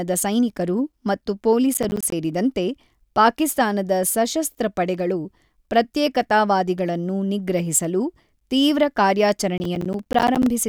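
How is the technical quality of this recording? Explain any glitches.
The recording has two bursts of processor overload crackle, from 1.74 to 2.12 s and from 9.58 to 10.46 s. The processor fell behind and missed buffer after buffer, and each miss left a short silent hole with hard edges. The result is a gritty, tearing rattle over the speech, consistent with a dozen or more missed buffers of around 10 ms each. Unlike a single dropout, it is a dense run of tiny gaps that ends once the load eases.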